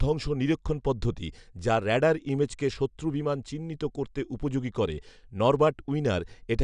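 No technical faults can be heard anywhere in the recording.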